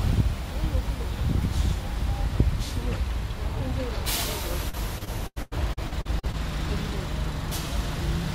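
From 4.69 to 6.35 s, packets were repeatedly lost or late, causing repeated packet loss (robotic sound): over a dozen patched gaps, up to 94 ms each, make the audio choppy.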